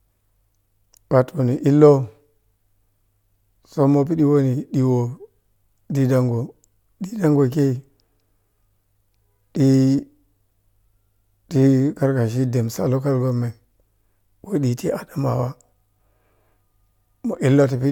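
Listening to the speech here, no technical fault stood out at any point.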